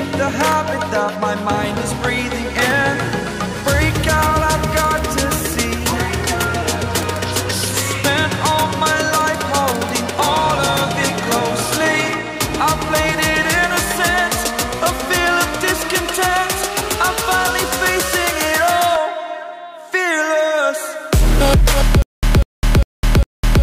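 From 22.02 s to the end of the audio there is a stutter with silent gaps: a burst of about 195 ms repeats four times, each followed by about 207 ms of digital silence, giving an even cycle of roughly 402 ms. The likely cause is a stalled player or stream that replays its last buffered fragment on each retry and then runs dry. The material that should have played during those gaps is lost.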